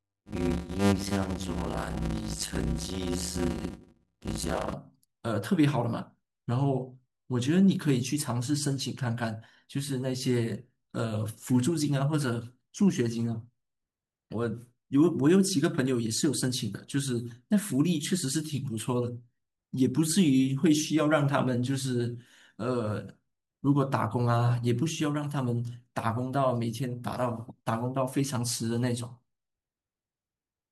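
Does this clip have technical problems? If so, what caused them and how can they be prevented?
Yes. A block size mismatch (padded) runs from 0 to 4.73 s. One stage hands over shorter blocks than the next stage reads, and the shortfall in each block is filled with silence. The repeated gaps produce a 100 Hz buzz, and the speech plays at about 0.53 times normal speed. This fits 256-sample blocks padded out to reads of roughly 480 samples. To prevent it, configure every stage in the chain to use the same block size.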